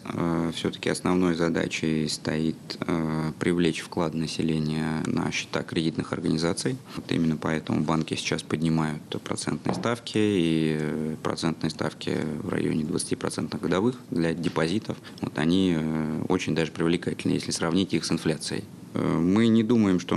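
Nothing stood out as a technical problem on listening to this audio.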